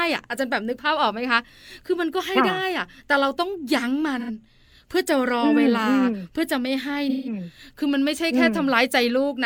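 AAC frame loss with concealment occurs at 4.20–4.30 s and again at 7.09–7.33 s. The decoder rebuilds the missing audio from the last good spectrum, so each gap becomes a smeared, noisy patch. The spans fit roughly two and four lost frames.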